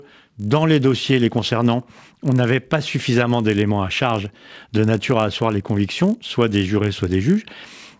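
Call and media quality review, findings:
Steady 50 Hz buzz under the speech, whole clip. Present only with signal, gone in pauses. Component: resampler restarted on every block. Each 20 ms block converted in isolation, so every block edge carries a small error. The rate fits the 20 ms block size; conversion was 44.1 kHz to 16 kHz. Fix: keep resampler state across blocks.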